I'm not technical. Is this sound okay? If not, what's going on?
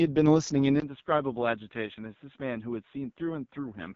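No. The whole recording went through the AMR wideband (HD Voice) codec, the phone system's speech compressor, running at one of its lowest settings. It squeezes the speech so hard that it sounds rough and raspy throughout, with the crisp top end filled in by hiss-like noise.

At 0.8 s the sound very likely changed over to a poorer input device, such as a different microphone or a headset. There's a brief gap of about 20 ms, then the speech turns duller and more muffled, a little quieter, with faint added background noise, until the end.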